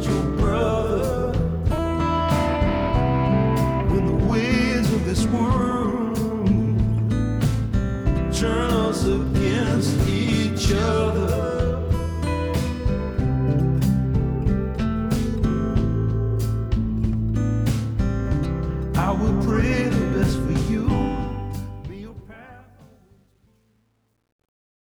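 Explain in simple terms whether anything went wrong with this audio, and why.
The fade-out turns gritty from 21.21 s, then is at its worst from 22.44 s to the end. This is truncation distortion on a fade: too few bits, no dither.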